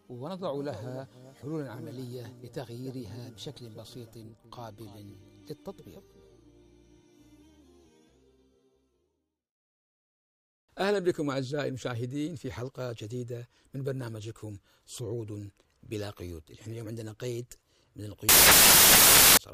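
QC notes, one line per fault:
18.29–19.37 s, samples built from the wrong bytes: for just over a second near the end, the sample bytes are assembled misaligned or in swapped order, so the rapidly changing low bits land in the high positions and the sound is replaced by loud, harsh broadband noise. Unlike ordinary hiss or clipping, the noise is loud and harsh, taking the place of the audio rather than sitting under it or flattening its peaks.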